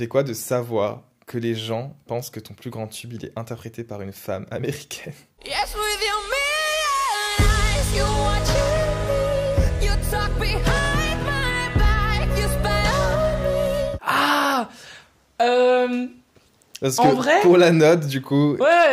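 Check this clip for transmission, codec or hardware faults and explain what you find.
No transmission, codec or hardware faults found.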